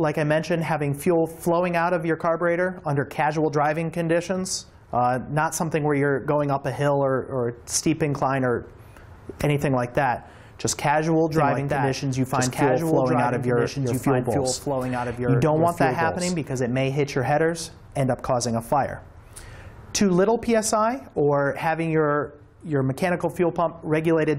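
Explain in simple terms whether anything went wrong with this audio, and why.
A doubled audio track runs from 11.32 to 16.62 s: a quieter copy trails about two seconds behind, likely from the sound being recorded twice.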